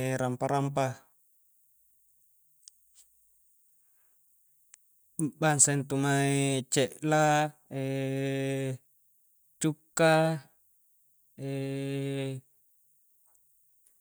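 No technical faults can be heard anywhere in the recording, and the signal stays continuous and steady throughout.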